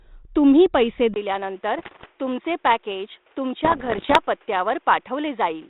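At 1.14 s, after a 20 ms gap, the sound abruptly turns duller and about 5 dB quieter, with nothing above 3.8 kHz and a new noise floor about 35 dB down. That is likely the input switched to a poorer device, since a codec limit would be present from the start. Bit errors on an ADPCM link, at a rate of a few percent, produce rough pops and brief level jumps from 1.78 to 2.06 s and from 3.64 to 4.19 s. These are rasping bursts rather than silent dropouts, riding over the light hiss of 32 kbit/s G.726.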